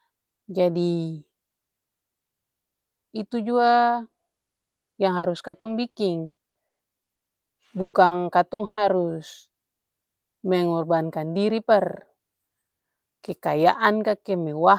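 From 5.17 to 7.24 s, the speech breaks up with repeated packet loss, giving a robotic sound. Nine gaps fall in this stretch, the longest 120 ms. Each hole is filled by stretching the last sound. About a third of the span is patched this way, so it sounds choppy.

Four bursts of packet loss follow, at 7.81 to 7.96 s, 8.05 to 8.14 s, 8.53 to 8.62 s and 8.65 to 8.80 s. Each drops 60 or 120 ms. The last sound is held and faded. The final burst fades fully to silence for about 40 ms.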